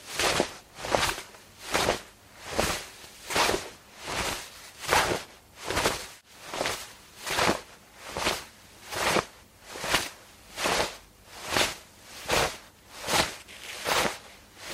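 Nothing stood out as a technical fault on listening to these everyday sounds.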